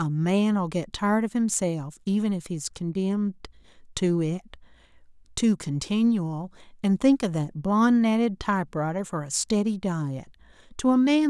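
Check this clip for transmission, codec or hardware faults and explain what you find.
No faults stand out anywhere in this speech recording.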